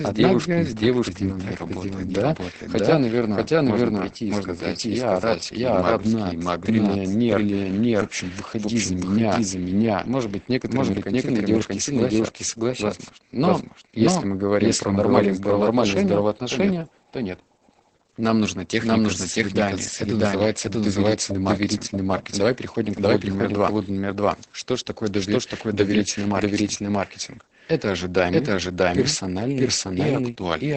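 Throughout the speech, a doubled audio track trails the original by roughly 0.7 s at about equal level, likely from a second, slower capture path mixing the sound in again. From start to end, heavy Opus voice compression leaves nothing above 8.7 kHz, so the speech sounds muffled, hoarse and slightly robotic, which fits the SILK coder at around 10 kbps.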